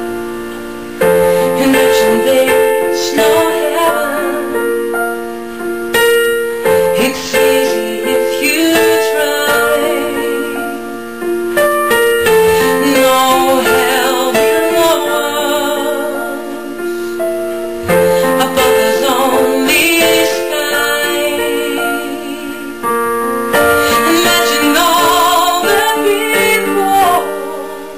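Hard clipping runs through the whole clip. The signal was pushed about 9 dB past what some stage could pass, so around one sample in twenty got its peak sliced flat, and those flat tops add harmonics high up wherever the loud moments hit.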